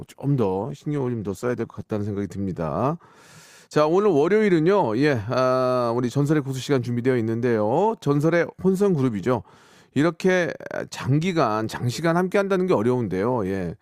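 From 0.0 to 2.0 s the speech plays from an adaptive stream starting at a low bitrate. The player opened on a thin version to begin fast, which sounds like a 16 kbit/s Opus stream. The treble is missing or artificial. Codec smearing is strong. At 2.0 s the player has measured the connection and switches up. The quality jumps at once, to what sounds like 64 kbit/s. There is no gap.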